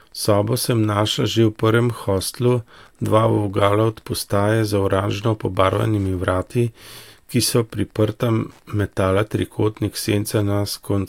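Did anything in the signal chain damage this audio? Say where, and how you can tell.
Yes. Wi-Fi interference entered the analogue wiring: faint ticks every 102.4 ms throughout, from rectified beacons, appearing as regularly spaced vertical spectrogram lines well below the speech.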